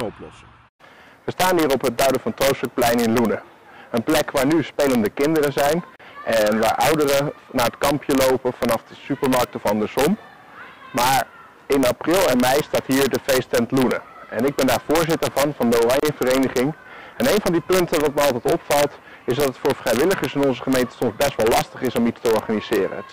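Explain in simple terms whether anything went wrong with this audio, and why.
Sharp, violent cracks burst out on the loudest moments throughout the clip, harsher than ordinary distortion. This is integer overflow. The level was pushed only slightly too high, and a tiny fraction of the peaks went past the largest number the audio format can hold. Instead of being held at the ceiling, those peaks wrapped around to the opposite extreme, so each one jumps from full loudness one way to full loudness the other way, producing the crack.

Twice the sound drops out for a split second and then carries on from where it stopped: at 5.96 s for about 36 milliseconds, and at 16.0 s for about 31 milliseconds, ten seconds apart. This is a gap at a join of encoded pieces. The audio was compressed in separate chunks and joined without trimming. Each chunk's encoder added a little silence at its start and padding at its end, leaving these brief holes at the seams.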